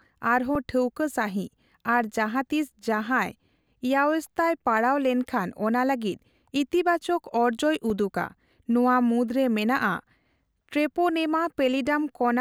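The output buffer starved three times, at 0.55 s, at 7.90 s just after "ᱞᱟᱹᱜᱤᱫ ᱤᱛᱤᱵᱟᱪᱚᱠ ᱚᱨᱡᱚᱭ", and at 10.56 s. Each is an underrun with held sample: the converter froze on its last value for 1.8 ms, 1.3 ms and 2.7 ms, the last two of which are 64- and 128-sample blocks. A few milliseconds of live speech vanished each time.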